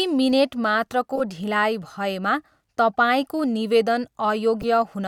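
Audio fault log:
1.16–1.21 s and 4.61–4.64 s, corrupt frame decoded: damaged frames were played anyway, causing brief misplaced-frequency chirps lasting a few frame lengths, not a one-sample click.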